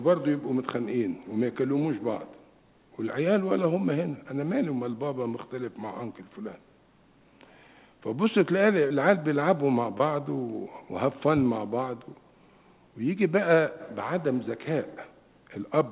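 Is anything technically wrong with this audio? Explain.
Yes, there's short concealed packet loss at 8.88–8.92 s and 9.98–10.02 s. About 20 ms of audio arrived too late each time, so the receiver extended the preceding sound and blended back, leaving a brief smear or wobble. The call path itself tops out at 4 kHz, which fits G.711 A-law.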